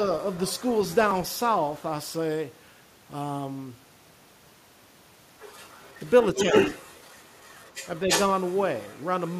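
A second, fainter voice sits under the speech from 0.2 to 0.95 s, well below the talker, then returns as a very faint scrap at 1.3 to 1.39 s. From 5.4 to 9.05 s it becomes almost as loud as the main speech, and it surfaces once more, faintly, from 9.22 s to the end at 9.4 s. This is the other side's voice leaking through. The likely cause is the device's loudspeaker feeding the far end into the microphone, with the echo canceller leaving part of it behind.

Inside that loud stretch, between 6.35 and 6.54 s, the talker's own speech briefly sinks by a small amount, adding up to about 70 ms of dipped sound. This is speech suppressed in double talk. With both sides talking at once, the echo canceller was likely unable to tell the near talker from the echo and turned everything down together.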